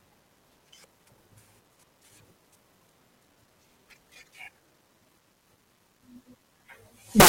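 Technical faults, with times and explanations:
7.20 to 7.28 s, integer overflow: at the very end of the speech, peaks driven about 17 dB past full scale wrap around to the opposite sign. They are not held at the limit. Each wrapped peak jumps across the entire range in a single sample, giving harsh, violent cracks far sharper than ordinary clipping. On the waveform, loud peaks suddenly appear as tall spikes of reversed polarity. On the spectrogram, bright vertical broadband streaks run to the top frequencies.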